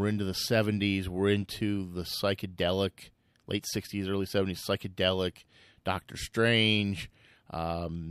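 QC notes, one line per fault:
No faults detected in this speech recording; nothing to flag.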